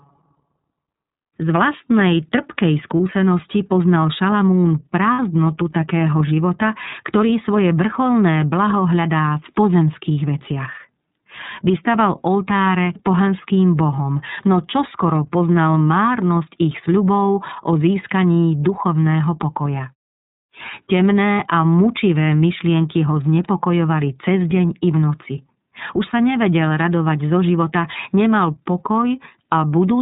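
iLBC codec coding runs through the whole of this speech clip. The band stops at 4 kHz, and the damage is plainly audible as a rough, synthetic edge on the voice. iLBC codes each frame's excitation independently of the previous one, and the sound fits its 30 ms frame mode at 13.33 kbps. Lost iLBC frames occur at about 2.98 s and from 5.12 to 5.19 s. These gaps fit one lost 30 ms frame and two frames totalling 60 ms. In each gap the decoder fills the hole by repeating the last pitch cycle mixed with noise, which is heard as a held, buzzy or breathy vowel. Because each frame stands alone, the voice returns almost immediately after each gap.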